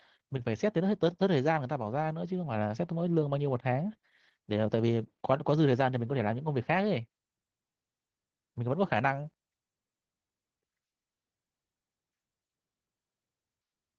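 Throughout the clip, the speech has gone through Opus voice compression in hybrid mode. SILK codes the excitation coarsely, and a sparse CELT layer covers the top band, which fits a bitrate near 16 kbps. The speech sounds plainly hoarse, muffled and faintly robotic.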